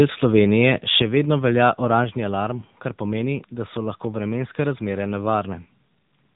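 Throughout, the speech carries AMR narrowband mobile codec damage: nothing passes above 3.8 kHz, and the low-bit coding of the vocal-tract model leaves the voice plainly buzzy and synthetic, which fits a rate near 8 kbps. Each 5 ms is rebuilt from 2 to 10 pulses rather than the original waveform.

From 0.38 to 0.69 s the loudest syllables take on a harsh, crackling edge with flattened peaks, likely microphone overload: input gain set about 3 dB too high drove the converter to its limit, cutting off the tops of a small fraction of samples.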